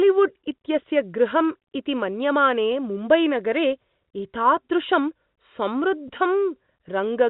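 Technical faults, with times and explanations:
6.08 s, packet loss with pitch repetition: one packet's worth of audio, 10 ms, went missing, and the receiver covered it by looping the last pitch period, so you get a brief buzzy hold.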